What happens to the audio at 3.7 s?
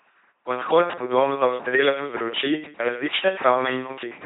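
At 3.7 s the speech carries the same LPC-10 vocoder damage heard through the entire clip, not a local event. Each moment is rebuilt from a ten-pole vocal tract model driven by either a pulse train or noise, giving a buzzing, mechanical robot voice, and nothing remains above 3.9 kHz. The sound fits a 2.4 kbit/s vocoder. Its hard all-voiced or all-unvoiced switching, buzz or hiss with no mixture, sets it apart from a CELP-type codec's rough warble.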